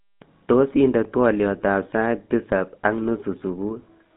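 From start to finish the speech has a buzzy, gravelly roughness over a narrow telephone band, running from about 150 Hz to 3.7 kHz with nothing above 3.8 kHz. This is the GSM full-rate codec, whose damage here is plainly audible. It rebuilds the voice from a vocal-tract model excited by regularly spaced pulses and keeps only a third of the excitation samples, which fits its 13 kbps rate and produces the coarse, buzzy texture.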